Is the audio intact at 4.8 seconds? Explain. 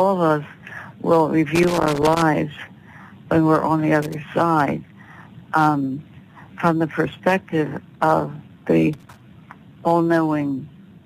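Yes, the audio at 4.8 seconds is intact, with no dropout, click or other fault at that point.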